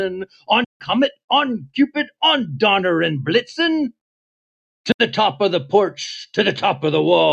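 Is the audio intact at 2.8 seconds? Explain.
Yes, the audio is intact at 2.8 seconds, with no audible fault at that moment.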